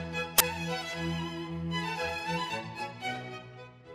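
A short, loud burst of harsh digital noise cuts into the audio from about 0.38 to 0.41 s, lasting roughly 23 ms. This is an uninitialised buffer: one block went out to playback before any audio was written into it, so stale memory contents were played as samples. The length fits a 1024-sample buffer.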